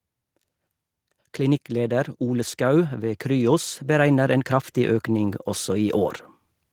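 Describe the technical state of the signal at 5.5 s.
At 5.5 s the signal is caught in an automatic gain rising, which runs from 1.36 s to 6.08 s. The automatic gain control has judged the input too quiet and is steadily pushing its gain upward, about 9 dB across the whole span. At this moment the speech is well into that climb, so the voice and the background noise beneath it swell together, louder than at the start of the rise and still growing.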